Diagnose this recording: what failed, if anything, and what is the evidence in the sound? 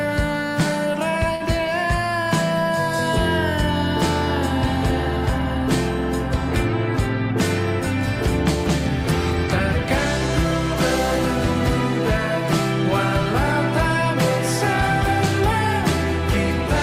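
A short stall from a late packet occurs at the network and jitter-buffer stage, at 1.35 to 1.42 s. The buffer ran empty, so the receiver stretched the last sound for 49 ms, with a slight buzz or dip. Nothing is skipped. Playback then resumes 49 ms late.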